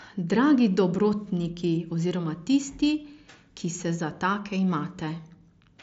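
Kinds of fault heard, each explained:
No fault can be heard in this speech recording. It carries the character of a Bluetooth mSBC headset link, with speech reaching up to about 8 kHz and a light graininess on the louder sounds.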